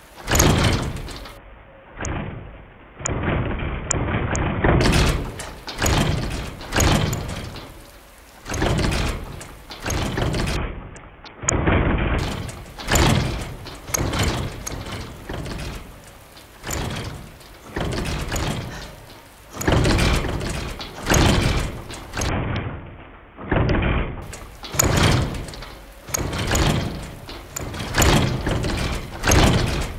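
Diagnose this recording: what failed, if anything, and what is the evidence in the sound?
A Bluetooth SBC bit pool drop occurs at 1.37 to 4.81 s, 10.56 to 12.19 s and 22.29 to 24.22 s, at the codec stage. Each time the treble dulls and gritty noise rises. That fits the bit pool falling from 31 to about 5, roughly 50 kbps, which starves the upper sub-bands.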